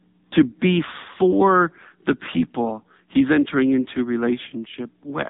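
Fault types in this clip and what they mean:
AMR narrowband mobile codec: speech squeezed through a vocal-tract model, buzzy and synthetic, fitting roughly 6.7 kbps; spectrograms show nothing above 3.8 kHz and smeared harmonics.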